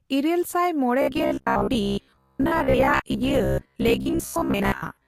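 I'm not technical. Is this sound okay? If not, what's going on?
No. From 1.02 s onward there's robotic sound from repeated short buffers: a rigid 67 Hz buzz, likely from looping tiny 15 ms snippets, rather than silent gaps.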